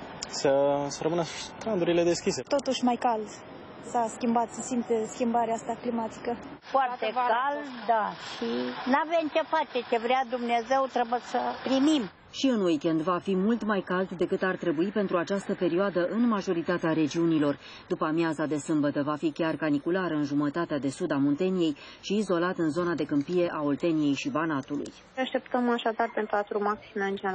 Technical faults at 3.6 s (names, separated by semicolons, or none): repeated buffer